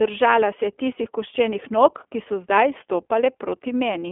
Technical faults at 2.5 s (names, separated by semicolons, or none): iLBC codec